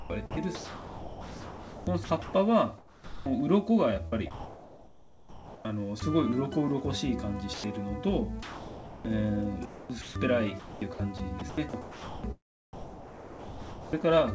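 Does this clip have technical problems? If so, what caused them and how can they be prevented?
Yes. The main problem is sound chopped by the voice detector, in three stretches: 0.0 to 3.26 s, 4.08 to 6.02 s, and 9.65 to 14.06 s. Within those windows the sender's detector keeps flipping on and off, and roughly 2.1 s, 1.4 s and 2.5 s of real sound respectively get swapped for comfort noise. That makes it choppy. The likely cause is a detector threshold set too aggressively for this material. Lowering its sensitivity or adding more hangover time would keep those quieter bits transmitted.

There are also two spots of sound dropped by the voice detector: a short 100 ms gap at 7.54 to 7.64 s and a longer 620 ms one at 8.43 to 9.05 s. Here the sound simply gives way to steady comfort noise until the detector picks up again, which is likely because it misread those passages as background. The band-limited G.722 call path, with nothing above 8 kHz, is itself working normally. 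Turning off discontinuous transmission, or relaxing the detector, would prevent these gaps.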